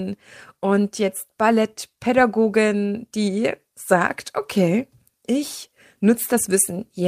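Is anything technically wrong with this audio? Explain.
No, nothing technically wrong can be heard in this speech recording, and the signal holds steady and intact all the way through.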